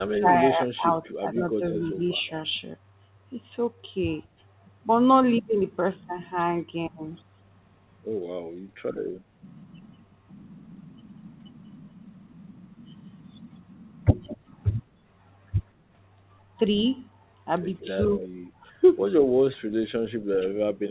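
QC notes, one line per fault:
0.07–2.22 s, 18.19–18.24 s and 20.32–20.5 s, speech suppressed in double talk: the talker's level sinks and parts break away while the far side is also active. The drop is deepest at the end, around 25 dB, and about 20 dB early on, where roughly 0.7 s is hit. The 18.19 s dip is slight, about 5 dB. The likely cause is an echo canceller that cannot separate near speech from loudspeaker echo during overlap, so it turns both down.
0.92–2.31 s, 14.25–14.37 s and 17.79–18.28 s, echo leak: a faint second copy of the speech trails the original by about 180–186 ms, some 15 dB below it. It sits over the opening stretch, appears as a short flicker near 14.3 s and returns near 18 s, all within the clip's 4 kHz band. This is likely loudspeaker sound reaching the far microphone that its echo canceller failed to remove fully, so it was sent back.
9.2–9.4 s and 14.93–15.05 s, background gated by the echo canceller: the room tone suddenly dips and then comes back. 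The first dip lasts about 200 ms and drops up to about 18 dB. The second lasts about 100 ms and drops about 11 dB. The canceller clamps the microphone hard while loudspeaker output is present, taking the ambient floor down with it, then releases.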